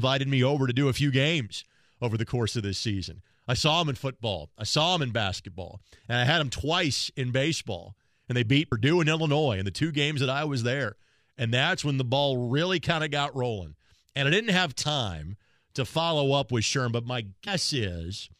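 At 8.71 s, 14.82 to 14.84 s and 17.46 s the speech jumps forward, dropping roughly 70, 50 and 100 ms of audio. These are compressed frames skipped: whole coded frames were never decoded, and the gaps fit a frame length of about 23.2 ms. On a spectrogram the harmonic lines break off and restart misaligned. The waveform shows an envelope step at each join.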